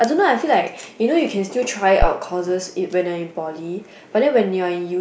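Speech clip with a phantom power thump from 2.02 to 2.08 s, a deep pulse peaking near -4 dBFS and decaying in 12 ms, unlike a plosive's breath-shaped, syllable-locked low-frequency burst.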